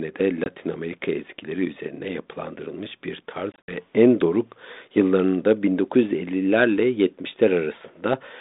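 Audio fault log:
0.44–0.48 s and 3.52–3.72 s: packet loss on an ADPCM call, one brief 20 ms hole, then 100 ms gone in bits over 160 ms between "ezgileri üzerine yapılandırılmış bir" and "en doruk yıllarında". After each hard-edged gap the decoder's predictor and step size are out of sync, so the sound comes back slightly distorted before settling.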